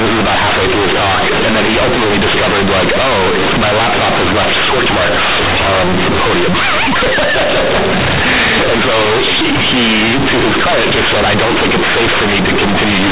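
From start to finish, A-law companded audio is read as linear 8-bit samples without expansion. Quiet sounds swell to the size of loud ones. The speech turns loud, buzzy and heavily distorted.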